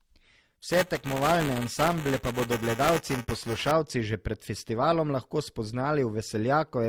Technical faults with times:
0.00-6.89 transcoding between lossy codecs
0.71-3.71 buffer tearing

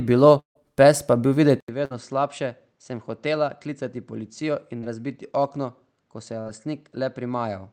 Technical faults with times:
0.39-0.57 long network dropout
1.60-7.72 input switched to a poorer device
1.85-1.92 burst of packet loss
4.78-4.84 short concealed packet loss
6.40-6.47 burst of packet loss

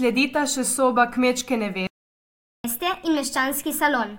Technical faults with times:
1.87-2.64 playback stall
2.64-4.18 catch-up at higher speed

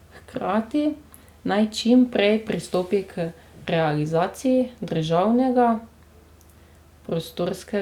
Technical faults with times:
none

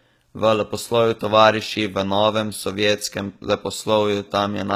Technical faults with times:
0.00-4.76 HE-AAC compression

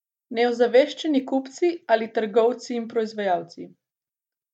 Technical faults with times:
0.00-4.54 resampler restarted on every block

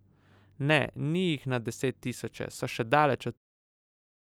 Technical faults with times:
none

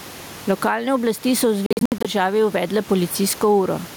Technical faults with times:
0.00-3.97 gain pumping
1.66-2.07 Bluetooth dropout

